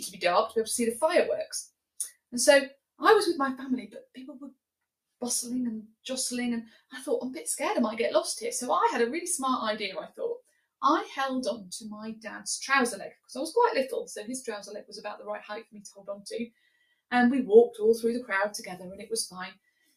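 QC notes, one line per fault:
No faults heard anywhere in this clip.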